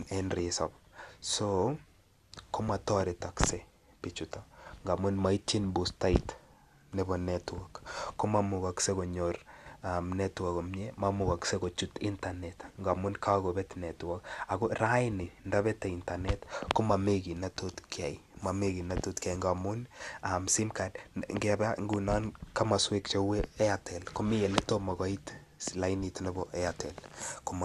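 From start to finish the speech sounds dull, with a gurgling, granular roughness, likely the mark of MP2 compression at a low rate that fits roughly 80 kbps. Starved of bits, the encoder has switched off its upper sub-bands and coarsely quantised the rest. On a spectrogram, nothing appears above 12.2 kHz, and blocks of energy just below that edge flicker on and off. The waveform looks normal.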